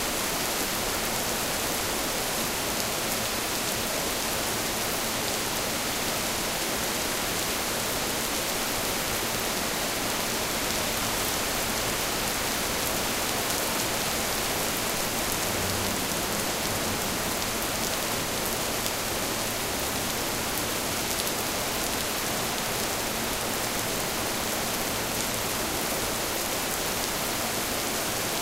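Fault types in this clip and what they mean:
Chunks out of order: short pieces of the audio play in the wrong sequence, so a 60 ms chunk that arrived late sounds after chunks that should have followed it, making a brief jumbled moment with three hard joins. This happens at 7.98 to 8.16 s (two chunks late), 16.62 to 16.86 s and 23.34 to 23.58 s (three chunks late each). Unlike a dropout or a repeat, no audio is missing or duplicated; it is only reordered.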